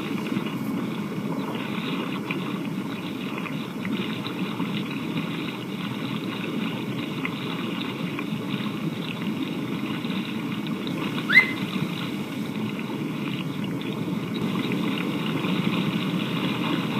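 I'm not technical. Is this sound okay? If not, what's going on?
No. From 14.42 s to the end, everything is heard twice: a second, equally loud copy trails about a third of a second behind, starting abruptly. This is a doubled audio track, likely from the sound being recorded again through a slower path.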